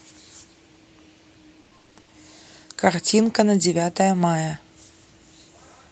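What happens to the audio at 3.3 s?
From 3.23 to 3.29 s the speech turns briefly rougher and noisier, with no gap. This is a lost packet rebuilt from error correction: about 40 ms, which fits two lost packets, was played from the low-bitrate copies the Opus packets that followed carried.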